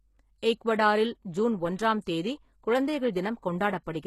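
Throughout the speech, nothing sounds above about 12.3 kHz, yet s sounds stay bright, gritty and lispy, which fits HE-AAC compression, likely at around 16 kbps. Unlike a plain low-pass, the treble is still there, but it is rebuilt from lower bands and mismatched.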